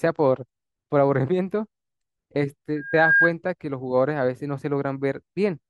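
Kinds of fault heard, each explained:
Loudspeaker feedback squeal: the microphone hears its own loudspeaker and the loop runs away at one pitch. From 2.76 to 3.34 s a 1.6 kHz tone swells over under half a second to a few dB above the speech. Unlike a steady whistle or hum, it grows by itself.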